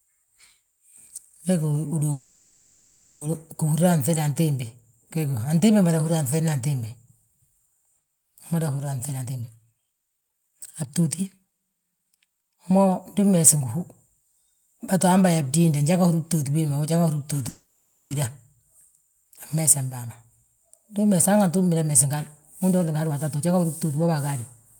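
Call audio freezes hit this speech at 2.11–3.24 s and 17.49–18.14 s: the last sound is stretched into a fading buzz or hiss for about 1.1 s and 0.62 s, then speech resumes where it stopped, with nothing lost but delay added, likely from packets held up while the jitter buffer ran dry. Jitter buffer speed-up follows at 9.16–13.77 s (123% speed, roughly a second trimmed), 21.90–22.18 s (135%) and 22.64–24.34 s (120%, under half a second trimmed). Pitch-period slices are cut out repeatedly to shrink the built-up delay, so the talking sounds hurried but keeps its pitch.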